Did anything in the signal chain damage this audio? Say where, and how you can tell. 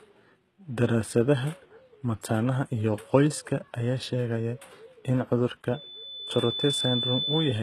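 Yes. Sibilants sound gritty and metallic throughout, with nothing above 12.3 kHz, which points to the codec stage, likely HE-AAC compression near 16 kbps rebuilding treble by band replication.

From 5.73 s, just after "sheegaya in cudurka", a 3.5 kHz tone swells over about a second to roughly speech level: loudspeaker feedback squeal, a microphone re-amplifying its own speaker.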